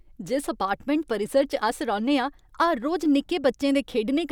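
Listening closely to this speech recording, nothing technically wrong stood out at any point.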